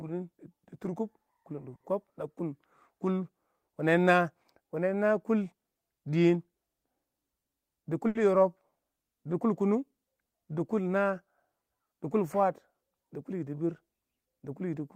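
At 1.75 to 1.83 s there is a short stall from a late packet. A packet was not there when it was due, the jitter buffer ran dry, and the receiver held the last sound for about 50 ms before resuming exactly where it left off. Nothing is lost, but the speech hangs briefly with a slight buzz or dip, and the stream now runs 50 ms later.

From 7.55 to 8.06 s a jitter buffer speed-up follows, as the receiver trims excess buffered audio. It cuts out short pitch-period-sized pieces in quick succession, removing roughly 50 ms in total, so the speech plays at about 109% speed with unchanged pitch and sounds hurried.

Immediately afterwards, at 8.08 to 8.18 s, a second short stall from a late packet stretches the current sound by 70 ms, again with nothing missing, adding a further 70 ms of delay and a brief held sound with a slight buzz or dip.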